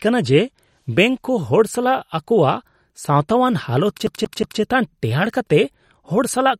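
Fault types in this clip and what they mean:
MP3 compression: Throughout the speech the sound is watery and swirly, with plainly audible smearing and nothing above 16 kHz, likely from MP3 encoding at a rate that fits 48 kbps. Unlike a plain low-pass filter, weak frequency content flickers on and off between frames.
CD stuck on one turn: From 4.07 to 4.61 s the same 182 ms slice of speech repeats three times, with a brief mute at each jump back. The even loop length and hard restarts set it apart from an echo, which overlaps and fades rather than replaying whole.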